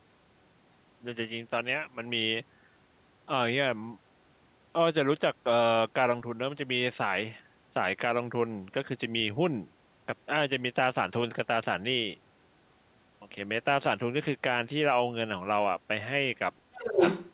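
From 16.74 to 17.01 s the speech is suppressed in double talk: it sinks by about 20 dB for roughly 200 ms, likely because the echo canceller ducked the talker. The waveform shows a sudden narrow trough. From 16.89 to 17.33 s the other side's voice is leaking through, about 5 dB above the talker, likely uncancelled loudspeaker echo. On the spectrogram it appears as a second harmonic pattern overlapping the speech, all kept below the call path's 4 kHz ceiling.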